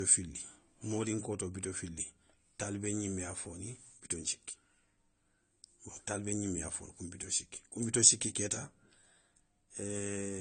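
Low-bitrate audio saved at a high bitrate, throughout the speech: nothing above 9 kHz survives, likely because a heavily compressed earlier encoding was re-saved as high-bitrate MP3, which cannot restore the missing detail.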